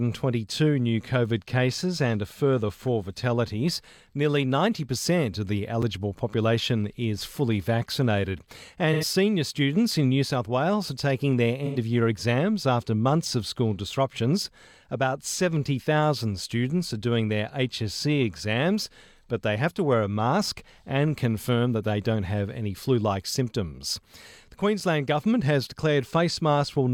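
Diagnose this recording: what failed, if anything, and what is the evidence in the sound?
A sharp tick at 5.82 s and again at 24.8 s, each a hole of about 5.8 ms with hard edges. This is a block of digital silence from the driver or buffer stage: the output buffer went unfilled and played zeros, which fits a 256-sample buffer.

Two smeared, noisy patches, from 8.93 to 9.04 s and from 11.66 to 11.77 s, each about 85 ms long. This is AAC frame loss with concealment at the codec or network stage. The span of each gap points to two lost frames, which the decoder filled by reusing the last good spectrum.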